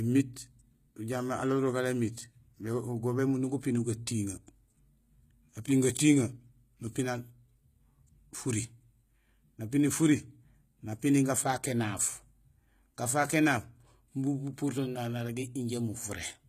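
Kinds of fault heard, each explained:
HE-AAC compression: treble likely rebuilt by band replication from lower speech bands, sounding gritty and lispy throughout, with nothing above 14.9 kHz, which fits a low bitrate.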